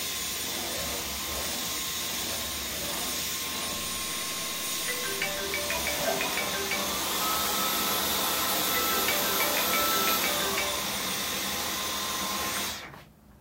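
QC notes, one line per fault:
3.77 to 5.43 s, stuck bit: for about 1.7 seconds the sound picks up a grainy noise, and the quiet stretches fill with noise instead of dropping away. That's likely one converter bit jammed high or low, so roughly half the samples are off by a fixed step of around -45 dBFS, in a pattern that follows the waveform. Small signals flip that bit as they cross zero, which is why the gaps get noisy.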